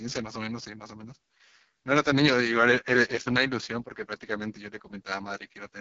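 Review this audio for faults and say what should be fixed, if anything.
Heavy AMR wideband (HD Voice) codec damage runs throughout the speech. It sounds rough and raspy, with nothing above 7.4 kHz. The coarse pulse-excited modelling points to the lowest AMR-WB mode, around 6.6 kbit/s. To prevent this, encode at 12.65 kbit/s or higher.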